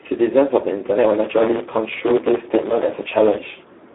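A speech clip carrying Speex codec damage from start to finish: heavy, hoarse and noisy, band-limited to roughly 250 Hz–3.6 kHz with nothing above 3.8 kHz. That fits narrowband Speex at around 8 kbps. Plain telephone filtering would narrow the band but leave the voice clean, without this coarse CELP excitation roughness.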